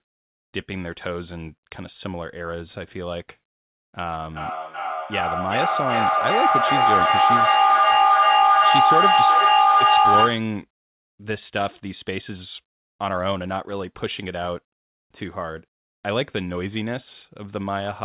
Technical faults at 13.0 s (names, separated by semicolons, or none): none